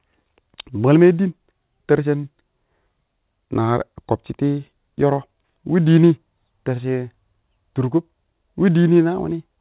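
Nothing stood out as a technical fault on listening to this speech recording.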